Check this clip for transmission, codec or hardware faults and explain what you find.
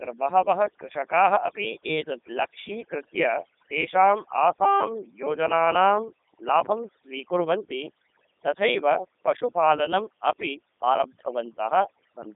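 Two faults run through the whole speech clip: overdone noise removal and the Codec 2 vocoder.

Overdone noise removal: from start to end, a noise reduction setting that was far too aggressive pulled bands near the noise estimate down to nothing, taking quiet parts of the voice with them. Gaps fall to near silence with twinkling specks. On a spectrogram, the background is dark with scattered isolated dots.

Codec 2 vocoder: throughout, the voice is rebuilt from pitch, voicing, energy and a spectral envelope as summed sine waves rather than the original waveform, and the heavy damage fits the 3.2 kbit/s mode. Speech comes out robotic and buzzy. A spectrogram shows a band from 200 Hz to 3.7 kHz and nothing above 3.8 kHz.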